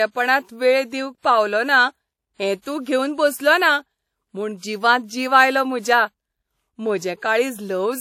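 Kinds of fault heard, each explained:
Low-bitrate audio saved at a high bitrate: the speech keeps earlier coding artefacts throughout and has nothing above 19.1 kHz, likely a 48 kbit/s WMA source re-encoded as 320 kbit/s MP3.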